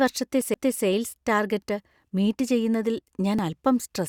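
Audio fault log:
0.41 s, 2.40 s and 3.39 s: overlap between stream segments. Each is a tiny skip where 5 to 14 milliseconds of the speech drop out and the waveform jumps straight across the gap. Two stream segments claimed the same stretch of time, and the player trimmed that overlap as if it were duplicated audio, when it was actually real speech. The segments are about a second long.
0.54 s: CD skip. There's a quick tick and a very short mute, only a moment, and then the speech picks up from a different spot instead of carrying on where it left off. That's the laser losing its track and landing on a neighbouring turn of the disc's spiral. The player silences briefly while it relocks, so the sound jumps forward or back by one or more disc turns.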